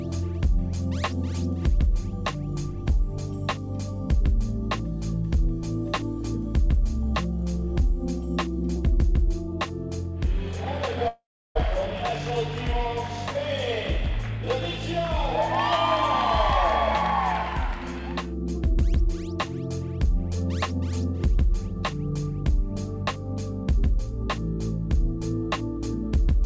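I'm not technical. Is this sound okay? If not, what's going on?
No. Around 11.08 s the connection likely stopped delivering audio for about half a second, a long network dropout. The receiving end tried to cover the gap by stretching the last bit of sound into a fading buzz, then fell quiet for roughly a third of a second. At 11.57 s the sound picks up again, but the missing half second is simply gone. The call route also cuts off everything above 8 kHz.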